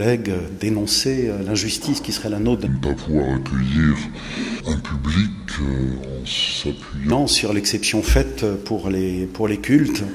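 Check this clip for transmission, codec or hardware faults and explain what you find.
One fault is present. From 2.66 to 7.12 s there is a wrong sample rate. The audio plays at two-thirds speed and drops about 7 semitones. This fits 48 kHz material played back at 32 kHz without conversion.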